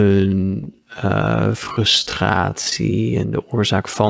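A time-stretched section runs from 0.0 to 3.07 s, ending just before "en de oorzaak van". The audio plays at about 0.57 times its normal pace with the pitch unchanged, so it drags. The likely cause is software lengthening the passage by repeating short pieces to keep the pitch.

Short concealed packet loss occurs from 0.64 to 0.67 s and again from 2.70 to 2.73 s, right before "en de oorzaak van". Each time, roughly 20 ms of audio failed to arrive. The receiver extended the preceding sound to fill the gap, then blended back into the real signal, leaving a brief smear or wobble. The connection itself carries nothing above 8 kHz, which fits a wideband call codec.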